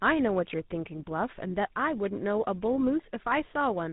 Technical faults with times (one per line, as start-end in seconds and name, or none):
0.00-3.93 tandem speech coding